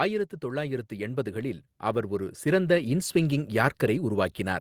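Automatic gain rising affects this speech clip from 0.4 to 4.37 s. The gain control judged the input too quiet and raised it by about 12 dB, so voice and background swell together.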